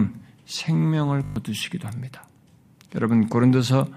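At 1.24 to 1.36 s, a system hang loop repeats one 20 ms buffer six times, giving a 50 Hz buzz. The waveform shows identical cycles, and the spectrogram shows harmonics at 50 Hz spacing. About a tenth of a second of speech is lost.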